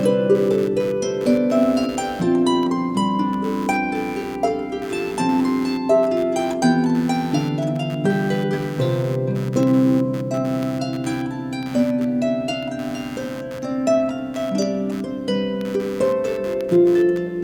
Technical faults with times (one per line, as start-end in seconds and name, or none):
0.00-17.43 computer activity noise
0.63-16.61 periodic USB or driver dropouts